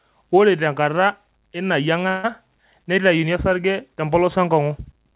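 Long network dropout, 2.08 to 2.25 s, just after "tenkata ena": about 160 ms of audio is likely missing in transit, and the receiver fills roughly 154 ms of it by stretching the last sound into a fading buzz, never reaching silence, before speech resumes with that portion gone. The narrowband sound, with nothing above 4 kHz, fits a 64 kbps G.711 call codec.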